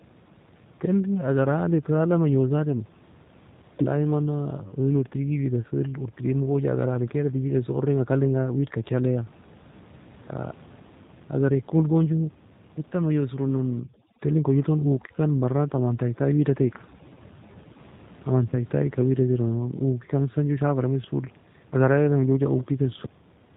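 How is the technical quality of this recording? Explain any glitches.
The recording is intelligible but technically compromised. A low-bitrate codec colours the whole clip, and two shorter faults appear near its end.

The G.729 codec runs throughout. The encoder discards the waveform and sends only a vocal tract filter, a pitch predictor and a handful of pulses for each 10 ms frame, rebuilding the speech from those parameters. Nothing above 4 kHz survives. The damage is plainly audible: the speech sounds narrow, slightly rough and synthetic, which fits a G.729A stream at 8 kbit/s. The room noise sits about 26 dB below the speech and warbles through the codec.

Overdone noise removal acts from 13.79 to 17.79 s. A noise suppressor set far too aggressively pulls any frequency band near its noise estimate down hard or shuts it off, taking the quieter parts of the speech along with it. The background collapses to near silence flecked with twinkling specks until the processing eases off.

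VoIP packet loss concealed by the speech codec follows from 18.50 to 18.54 s. About 20 ms of audio went missing, which points to a single lost packet. The decoder filled the gap by extending its last pitch and filter settings with falling gain. Because each frame builds on the previous one, the error carries past the gap, so the sound is briefly stretched and fades, and stays weakened for a moment afterwards.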